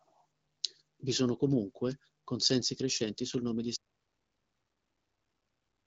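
At 3.77 s the speech cuts out into total silence, with no room tone, until the end. This is an audio dropout to silence, likely from lost input written as silence.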